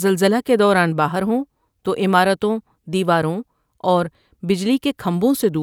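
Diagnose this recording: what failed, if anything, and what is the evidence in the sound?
Nothing seems to have failed here, as I hear no sign of trouble anywhere in this speech recording at any stage of the chain.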